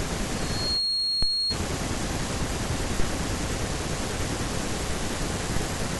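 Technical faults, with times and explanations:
0.37 to 1.58 s, loudspeaker feedback squeal: a pure tone near 4.3 kHz rises out of the speech, swelling over roughly the first 0.4 s until it sits a few decibels above the voice, then holds until it stops at 1.58 s. The microphone is hearing the loudspeaker it drives, and at that one frequency the round trip returns more than it sent, so the tone feeds on itself and keeps growing until the loop stops.
1.23 s, 3.00 s and 5.57 s, DC step: at each of these moments the waveform's zero line jumps, by about −16 dBFS at the first two and about −18 dBFS at the third, which is heard as a low thump or click while the speech carries on underneath unchanged. The offset does not hold, but drains away the way a high-pass near 5 Hz would let it, so each thump is short and the baseline settles back before the next one.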